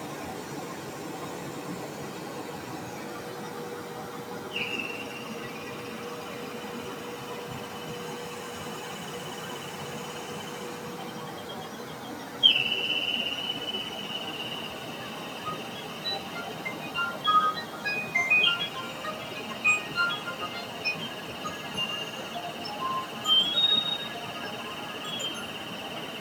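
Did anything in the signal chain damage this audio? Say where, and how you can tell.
Yes, a speech-style noise suppressor in the call processing was left running on these sounds. All the way through, onsets punch through while sustained parts and tails get pulled down, swinging by around 10 dB, so it pumps and thins. It's treating steady sound as noise.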